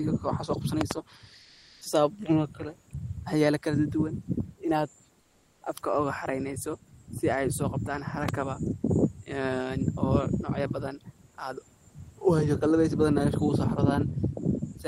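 At 0.81 to 0.93 s, two loud pops land in quick succession. They peak roughly 20 dB above the speech, which carries on underneath. The likely cause is a sudden voltage step, from a plug, a switch, static or a driver glitch, added to the signal. The circuits after it shape that step into a sharp pulse.

From 1.41 to 1.81 s, the background drops out for 400 ms. Comfort noise takes its place. It is a steady, smoother noise, about 35 dB below the loud parts and about 2 dB louder than the real room noise. That is likely Opus discontinuous transmission. The sender stops sending during a pause, and the receiver fills the gap with synthetic noise.

It happens again from 5.21 to 5.61 s, for another 400 ms. This time the fill sits about 40 dB down and about 3 dB quieter than the real background. The room noise, about 39 dB below the speech, loses its detail in both gaps.

At 8.29 to 8.31 s, a single pop peaks roughly 15 dB above the signal. 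It is a short, sharp click, likely from the same kind of electrical pulse.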